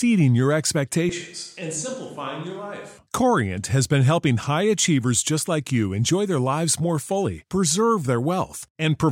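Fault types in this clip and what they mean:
Switch to a distant microphone: from 1.09 to 2.98 s the speech turns roomy and hollow, about 10 dB quieter, likely from a farther microphone replacing the close one.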